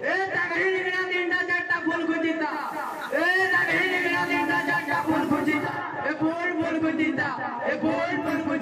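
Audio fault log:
2.40–5.87 s, digital radio blending to analogue: the receiver loses the digital stream and cross-fades over about 0.38 s to the FM broadcast of the same station, then back. Hiss rises to around 30 dB under the signal, and level shifts by about 2 dB.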